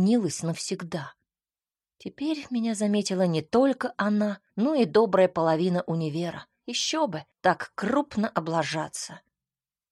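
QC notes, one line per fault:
5.17 s and 6.01 s, dropped samples: two isolated sharp clicks, likely from a fraction of a millisecond of the stream going missing each time, so the waveform steps abruptly to a later value. Each shows as a thin vertical line across the spectrogram and a tiny discontinuity in the waveform.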